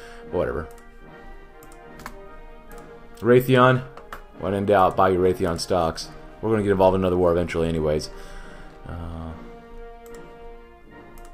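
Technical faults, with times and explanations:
No technical faults are audible.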